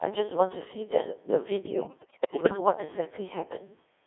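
Throughout the speech the signal has passed through a Codec 2 vocoder at about 1.6 kbit/s, confined to roughly 300 Hz to 3.6 kHz. Only pitch, voicing, energy and a coarse spectral envelope survive, and the decoder rebuilds the voice from sine waves, leaving it heavily robotic and buzzy.

From 1.76 s to 2.6 s, bit errors on the digital voice radio corrupt the decoded parameters at an error rate of around 15 percent. The span fits about twenty vocoder frames. Pitch, level and timbre jump from frame to frame, and the voice breaks into warbling, bleeping gibberish.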